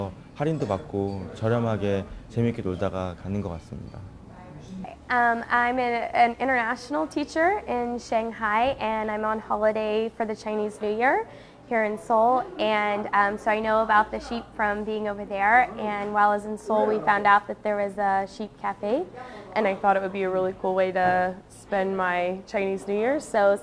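Wrong sample rate from 19.63 to 23.35 s: the sound runs at about 0.92 speed, roughly 1.5 semitones flat, which fits 24 kHz material played at 22 kHz.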